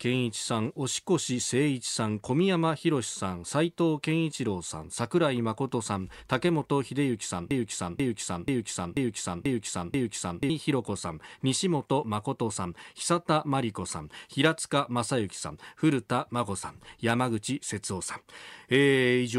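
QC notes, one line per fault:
7.51–10.50 s broken-record loop: a 0.49 s speech fragment repeats six times back to back, each copy identical and undecayed, unlike an echo. The stream likely stalled and kept resending its last fragment, so the speech due in those three seconds is lost.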